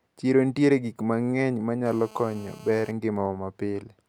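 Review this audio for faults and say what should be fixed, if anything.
GSM phone buzz runs from 1.86 to 2.91 s. It is a hard, raspy buzz at 217 Hz with many harmonics, about 23 dB below the speech and steady. A nearby 2G phone on a call transmitted in pulses, and the audio circuit rectified them. Keep phones switched off or well away from the microphone and cables.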